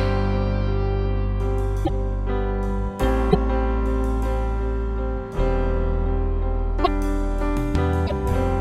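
At 1.84, 3.31, 6.83 and 8.06 s the audio skips ahead with a roughly 50 ms glitch, about two 26.1 ms frames, likely a broken MP3 bit reservoir. Each shows as a brief broadband smear or gap on a spectrogram.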